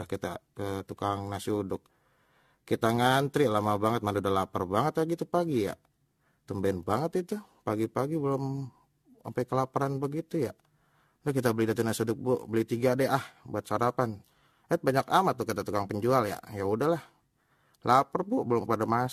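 Throughout the speech there is generation loss: swirly, smeared, hollow sound and blurred consonant attacks, worse than a single encode would leave. The likely cause is repeated lossy re-encoding, around seven passes of something like AAC-LC near 64 kbit/s.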